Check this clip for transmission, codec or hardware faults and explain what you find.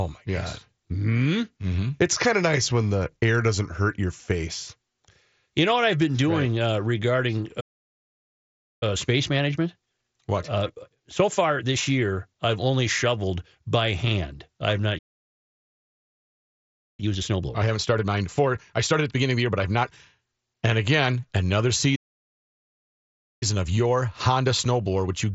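The speech is interrupted three times by playback stalls, each followed by time-compressed catch-up, heard through a Bluetooth mSBC headset link with nothing above about 8 kHz and a light graininess.

Playback stall, 7.6 to 8.83 s, 14.98 to 17.0 s (after "hand I have not") and 21.95 to 23.43 s (after "again another"): the speech cuts to silence for 1.21 s, 2.0 s and 1.46 s, then resumes. The likely cause is the player running dry or its thread being blocked.

Time-compressed catch-up, 8.83 to 11.83 s at 1.25 times speed, 17.0 to 20.0 s at 1.5 times, and 23.43 s to the end at 1.15 times: after each gap the speech sounds hurried but keeps its normal pitch. The player trims its backlog by removing small slices and cross-fading over the joins.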